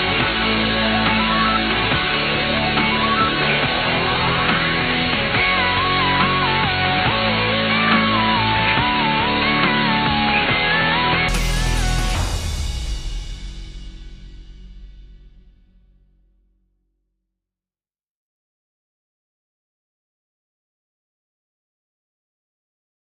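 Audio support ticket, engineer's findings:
Dull, boxy sound from 0.0 to 11.29 s, nothing above 4.4 kHz, with a noise floor roughly 30 dB down. Then it clears up with no gap and no level jump. Likely input switched to a poorer device, one with a narrower passband and its own background noise.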